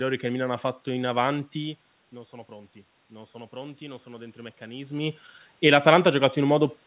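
From 2.48 s to 6.06 s, automatic gain rising can be heard. The speech had dropped by about 15 dB at the microphone, as when a talker leans away. The gain control treated this as too quiet an input and raised its gain slowly, by about 5 dB over more than three seconds. Voice and room noise swell together. The level creeps up rather than jumping. Throughout, nothing is heard above 4 kHz, which fits a narrowband G.711 call path.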